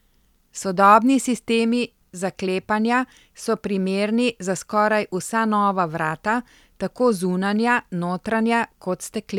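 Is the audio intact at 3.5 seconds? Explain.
Yes, the speech at 3.5 seconds plays through intact, with no dropout, click, distortion or other fault at that moment.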